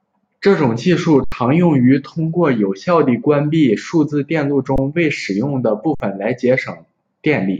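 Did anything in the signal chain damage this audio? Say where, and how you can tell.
Yes, it's a driver or buffer problem: three underruns with held sample, at 1.24–1.32 s, 4.76–4.78 s and 5.95–6.00 s. The output ran dry, so the speech freezes flat for 80, 20 and about 54 ms. Roughly 70, 20 and 50 ms of live audio was lost each time.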